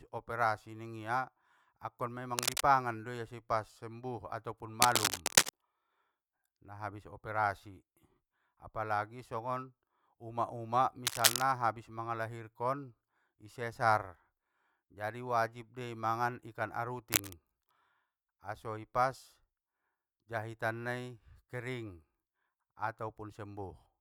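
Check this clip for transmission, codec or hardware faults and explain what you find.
The clip has one hardware fault, cable scratch noise, heard four times: 2.38 to 2.64 s, 4.82 to 5.50 s, 11.06 to 11.42 s and 17.12 to 17.33 s. Dense, uneven rustling sits over the speech, about level with it at first and about 5 dB louder afterwards. It is likely a worn cable or connector being moved, with its contact resistance changing quickly. Unlike isolated clicks or digital dropouts, it is a dense burst of scratchy texture.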